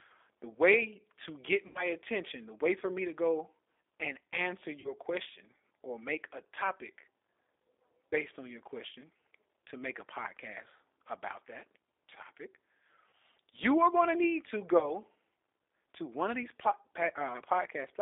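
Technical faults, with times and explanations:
Throughout: G.729 codec. The audio is confined to roughly 300 Hz to 3.6 kHz, and plainly rough and synthetic, because each 10 ms frame is rebuilt from a vocal tract filter, a pitch predictor and a few pulses. This fits an 8 kbit/s G.729A stream.
1.67–1.92 s, 4.80–4.93 s, 13.10–13.12 s, 14.79–14.92 s: VoIP packet loss concealed by the speech codec. The losses fall after "the way to get", after "to go and answer", and after "going to need to", lasting about 80, 40, 30 and 20 ms. The decoder stretches its last pitch and filter into a fading buzzy tone or coloured noise, and the sound stays weak or distorted for tens of milliseconds or more afterwards.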